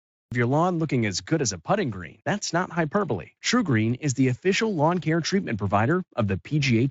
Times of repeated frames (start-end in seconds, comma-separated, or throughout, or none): none